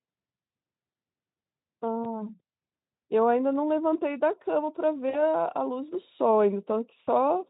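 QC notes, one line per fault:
2.04–2.27 s, 5.09–5.22 s and 7.03–7.09 s, VoIP packet loss concealed by the speech codec: each time the sound briefly smears into a buzzy tone or a coloured noise that fades, and stays thin or distorted for a short while afterwards. The gaps are about 20 ms at 2.04 s and about 40 ms at the other two. The Speex-style decoder filled them by repeating its last pitch and filter at falling gain, and it needed a few frames to recover once packets arrived again.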